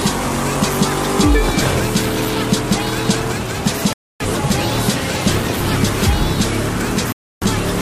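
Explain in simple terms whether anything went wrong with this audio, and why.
The sound drops out to silence twice, at 3.93 s for about 0.27 s and at 7.12 s for about 0.3 s, then carries on. This is likely a Bluetooth stall: wireless interference delayed the audio, so the headphones briefly ran out and paused.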